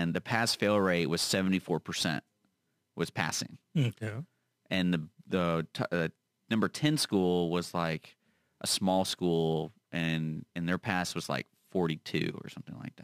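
From start to finish the speech carries crude rate conversion: samples were simply dropped to the nearest position rather than filtered, and the repeating error pattern fits a change from 48 kHz to 44.1 kHz. The result is a gritty, inharmonic fizz roughly 25 dB below the speech that rides on loud and bright sounds. Unlike steady hiss, it vanishes in pauses, and its tones don't track the voice's pitch.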